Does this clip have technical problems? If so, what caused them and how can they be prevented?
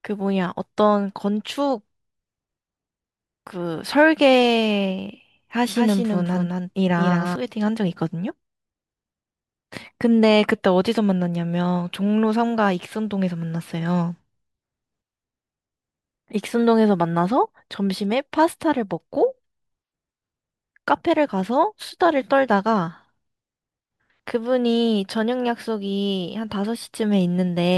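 Yes. A second, slower capture path or an edit holding two copies out of step likely mixed the speech in twice. This produces a doubled audio track from 5.76 to 7.36 s: a dry, full-band copy trails about a fifth of a second behind, a few decibels quieter, and starts and stops abruptly. Routing each source through a single capture path, and checking edits for overlapping duplicate regions, prevents it.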